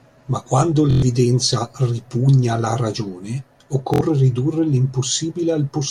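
Speech with two brief machine-gun buzzes: a Bluetooth stutter at 0.91–1.02 s and another at 3.94–4.01 s, just after "ripugna alla ragione". Late or lost packets made the receiver replay its last short buffer, losing about 116 ms and 70 ms of audio before the sound resumed further on.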